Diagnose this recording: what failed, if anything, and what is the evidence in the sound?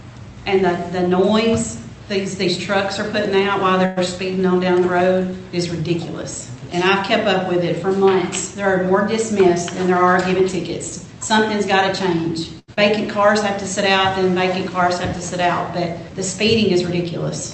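The network stage shows a call audio freeze at 3.85 to 3.99 s. For about 112 ms the last sound is carried on as a buzzy continuation while no new audio arrives, and then playback picks up exactly where it stopped. Nothing is lost and the delay grows by 112 ms, which points to packets likely held up in transit until the jitter buffer emptied. The receiver bridged the wait rather than dropping anything, so it reads as a freeze, not a skip.

The jitter buffer performs a speed-up from 9.14 to 11.75 s. Playback runs at 104% with the pitch unchanged, because the receiver repeatedly cuts out pitch-period-sized slices to shed excess buffered audio. Roughly a tenth of a second is removed over that stretch. The pitch staying constant is what separates this from a clock or sample-rate mismatch, which would shift pitch along with speed.

There is a short stall from a late packet at 12.59 to 12.70 s. 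A sound is held on for 89 ms while the jitter buffer waits, then playback resumes with nothing missing. The gap it inserts raises the delay by 89 ms. Unlike the earlier freeze, it is a brief hold on one sound rather than a longer decaying fill.

A skip ahead follows at 12.74 to 12.79 s. About 28 ms of fill bridges a jump past roughly 70 ms of audio, so the delay drops by about 50 ms. The two sides are joined nearly directly. This is a loss in transit or a jitter-buffer discard, and it differs from the stalls because audio actually goes missing instead of being pushed later.

A jitter buffer slow-down runs from 13.92 to 14.50 s. Playback drops to 94% at the same pitch, as single pitch periods are repeated to add 37 ms and rebuild the buffer reserve. The sound is drawn out but stays in key, which is the mirror image of the speed-up. The Opus path itself, which fits about 40 kbps, stops at 8 kHz.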